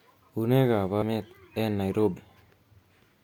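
At 1.01 s and again at 2.16 s, compressed frames are skipped. The speech jumps forward by roughly 0.7 s, then roughly 0.15 s, which fits about thirty and about seven lost 26.1 ms frames. Each join is a brief smeared blip. On a spectrogram, the harmonic tracks break abruptly at a soft vertical smear rather than a sharp click line.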